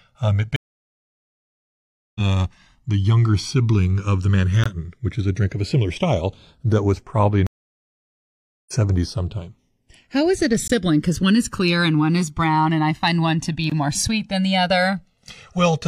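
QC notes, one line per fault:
Throughout: channels drifting apart. The two sides run on clocks roughly 200 ppm apart, with the offset reaching about 1.5 ms, so mono sums give slow, sweeping flanging.
0.56–2.21 s and 7.47–8.73 s (after "style that was probably"): stream reconnect. The stream goes quiet for about 1.6 s and then 1.2 s, then picks up roughly 0.7 s further along, skipping that stretch.
4.64 s, 10.68 s (after "is it a") and 13.70 s (between "find one to be" and "more sweet than the"): gap between chunks. Short 20 ms holes land on joins that fit 3 s chunks, so the sound stutters briefly without anything being lost.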